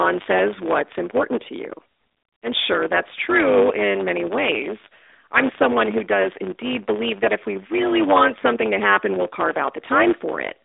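Throughout this speech recording, one stage hands on longer blocks than the next stage takes in, so the tail of every block is discarded. That is a block size mismatch (truncated), and the lengths fit 512-sample blocks being cut short. Each cut leaves a seam, heard as a steady 100 Hz buzz at the block rate. The dropped material also makes the talk run about 1.07 times fast while holding roughly its normal pitch. Through all of it, the AMR narrowband phone band stays between 250 Hz and 3.7 kHz, with nothing above 3.8 kHz.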